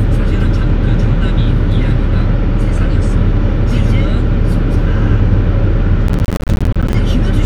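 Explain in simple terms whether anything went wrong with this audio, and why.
Between 6.08 and 6.94 s, processor overload crackle: dozens of tiny silent gaps, each a missed deadline, making a gritty burst rather than one clean dropout.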